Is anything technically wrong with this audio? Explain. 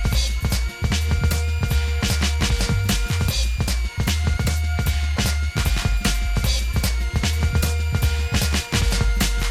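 Yes. A switching supply whistle runs throughout the music, drifting between 2.1 and 2.5 kHz, roughly 20 dB below it, from a switching power supply running in an audible burst mode or beating with another. A spectrogram shows a thin, wandering line.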